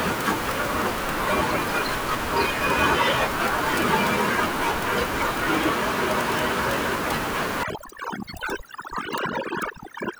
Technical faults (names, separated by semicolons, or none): overdone noise removal